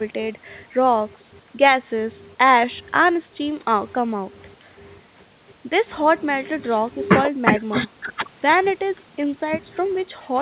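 Nothing stood out on listening to this speech, which comes through a call link that carries nothing above 4 kHz.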